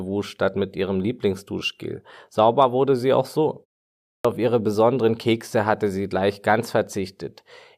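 At 4.10 s, after a 0.53 s pause following "wurde sie auch so", the speech resumes with a clipped start after a pause. The playback device appears to have gone idle during the gap and needed time to wake and relock, so roughly 146 ms of audio, up to 4.25 s, is swallowed. The phrase leading into "auf ihre besonderen" begins abruptly out of silence, its opening sounds missing.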